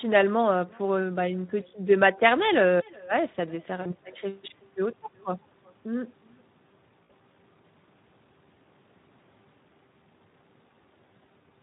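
Echo with no canceller runs through the whole speech recording: a quieter, thinner copy trails each phrase by roughly 0.4 s at about 26 dB down, as the far end's loudspeaker feeds its microphone and nothing removes it. Speex codec damage is also present throughout and plainly audible: the voice sounds hoarse and noisy, with a rough edge, which points to a low-bitrate setting of around 11 kbps that leaves the excitation starved of bits. VoIP packet loss concealed by the speech codec shows up at 3.81 to 3.97 s and 7.03 to 7.12 s. The decoder stretches the last sound into a fading buzzy tone or coloured noise, consistent with about 40 ms and 60 ms of lost audio, and the voice stays weak briefly afterward.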